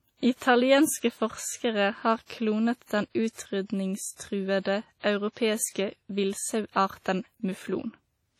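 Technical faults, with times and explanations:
Throughout: WMA compression, heavy. The speech rings and sounds washy, with a hiss that swells and fades along with it. The likely cause is a long-block transform codec such as WMA 1 at a rate that fits about 32 kbps, spreading quantisation noise across tens of milliseconds. Nothing sounds above 19.1 kHz.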